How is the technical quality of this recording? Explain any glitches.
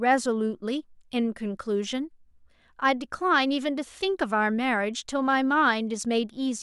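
No technical glitches can be heard anywhere in this speech recording. There is nothing here that calls for an explanation.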